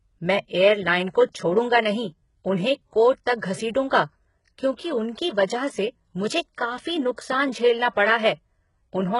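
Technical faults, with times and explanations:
Throughout, likely HE-AAC compression: heavily damaged speech, gritty lispy s sounds, nothing above 11 kHz, treble rebuilt from copied lower bands, which fits a bitrate around 12 kbps.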